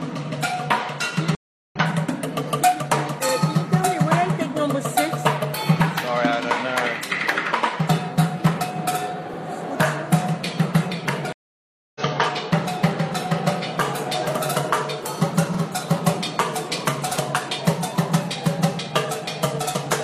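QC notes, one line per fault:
1.35–1.76 s: stream reconnect. The audio drops out for 0.36 s, then resumes roughly 0.4 s further on, so a short stretch of material is skipped. The connection broke and the player restarted with a fresh decoder mid-stream. The restart causes both the gap and the jump ahead.
11.33–12.01 s: stream reconnect. A longer 0.63 s silence follows the same mechanism, with playback picking up about half a second later than where it stopped.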